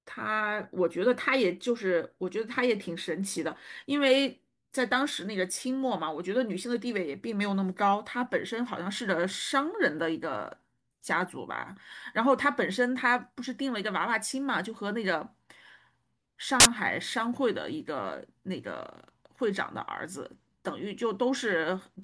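File tags played as audio, from 16.60 to 16.66 s: a block of metadata holding an embedded cover picture has been decoded as though it were sample data. Because the picture is itself compressed, its bytes are close to random, so the speech is cut by a burst of very loud white noise lasting about 54 ms. It starts and stops with hard edges, like a sudden slap of static.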